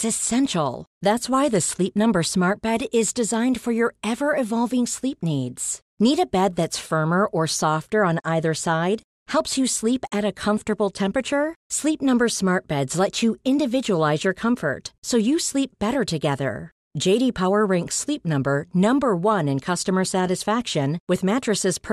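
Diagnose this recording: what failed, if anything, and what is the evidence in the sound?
Nothing in the chain failed: across the whole speech recording there is no audible defect pointing to any stage from capture to playback.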